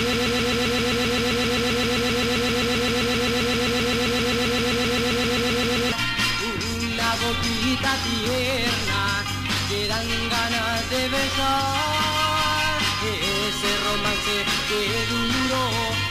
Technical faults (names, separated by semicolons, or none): broken-record loop